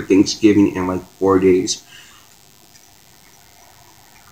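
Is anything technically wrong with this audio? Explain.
Yes. DECT cordless phone buzz runs throughout: a nearby handset's radio bursts every 10 ms get rectified, leaving a thin 100 Hz buzz with dense harmonics, well below the main sound.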